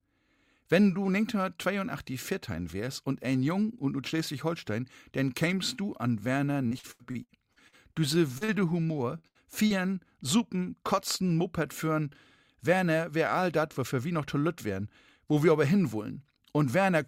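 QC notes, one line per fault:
6.67–7.96 s and 8.98–9.73 s, repeated packet loss (robotic sound): packets kept failing to arrive in time, leaving eight gaps in the first stretch and four in the second, the longest about 82 ms and 75 ms. The receiver patched each hole by extending the preceding sound, so concealment fills roughly a quarter of each span (26% and 22%). The audio turns choppy, with fragments missing.
8.38–8.44 s and 8.45–8.51 s, short concealed packet loss: two 40 ms chunks went missing, barely 10 ms apart, and each was bridged with about 30 ms of synthesized continuation before blending back into the real signal. The pair is heard as a quick double smear or wobble.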